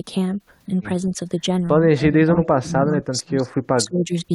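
This speech clip has speech suppressed in double talk. From 1.99 to 3.51 s the voice keeps dipping, by up to about 20 dB, for around a second in total. It happens again from 3.73 to 4.11 s. The likely cause is an echo canceller meeting simultaneous talk from the far side. It could not tell the near talker from loudspeaker echo, so it turned everything down.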